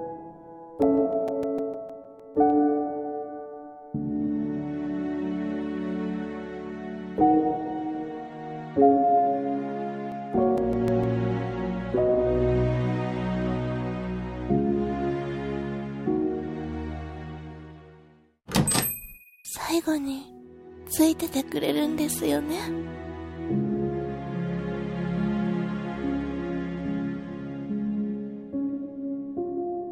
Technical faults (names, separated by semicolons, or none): CD scratch ticks